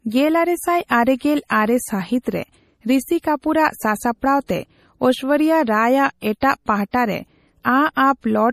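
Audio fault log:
Throughout: MP3 compression. The speech has a watery, swirling quality, with metallic chirps on s sounds and smeared consonant onsets. This is likely the work of an MP3 encoder short of bits, a level of damage that fits roughly 40 kbps. With so few bits, the encoder drops quieter frequency detail, which flickers in and out from frame to frame.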